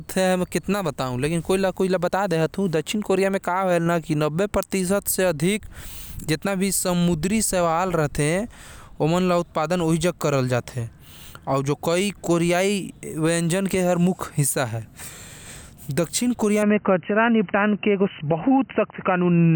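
Speech that turns dull and narrow from 16.63 s to the end, with nothing above 3 kHz, no gap at the changeover, little change in level and a faint new noise floor. This is likely an input switched to a poorer device. On a spectrogram the upper bands cut off abruptly at that point.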